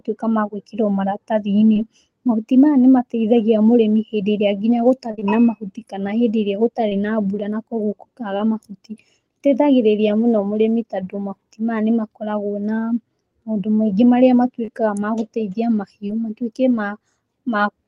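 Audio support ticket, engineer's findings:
Short concealed packet loss: ~20 ms packets late or lost at decoder, receiver extrapolating last pitch or shaped noise then crossfading back. Brief smears/wobbles at 1.73–1.77 s (before "mahuti maya nĩ mateithagia"), 5.11–5.23 s (three consecutive; between "mũrĩmi hĩndĩ ĩrĩa nginya" and "na mahuti kana hĩndĩ"), 6.89–6.93 s, 8.37–8.41 s, 14.65–14.70 s, 16.08–16.11 s (after "ma gũteithia").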